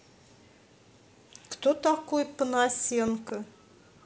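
A loud pop strikes this speech clip between 3.08 and 3.31 s: two sharp pops in quick succession, peaking a few decibels above the speech, which continues underneath without a break. The likely cause is a sudden voltage step or pulse entering the chain, from a plug being seated, a switch, a static discharge or a driver glitch, which the circuitry downstream then shapes into the short, hard double thump heard here.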